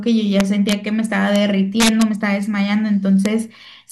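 Integer overflow hits the speech at 0.40–0.73 s, 1.36 s, 1.80–2.02 s and 3.26 s. Peaks overdriven by up to about 2 dB wrap to the opposite sign instead of limiting, giving violent cracks. The waveform shows abrupt sign flips, and the spectrogram shows bright broadband vertical streaks.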